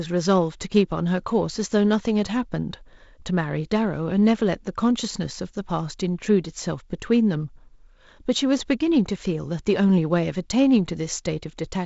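No technical faults are audible.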